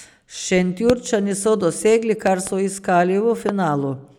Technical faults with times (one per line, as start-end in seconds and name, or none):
0.90-0.92 loud pop
2.27-2.49 loud pop
3.49-3.51 loud pop